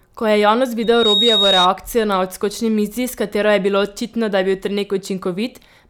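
From 0.82 to 1.69 s, loudspeaker feedback squeal: the microphone re-amplifies its own loudspeaker until a 3.8 kHz tone swells over roughly a third of a second to about 5 dB above the speech. A spectrogram shows one bright horizontal line; the waveform thickens into a steady envelope.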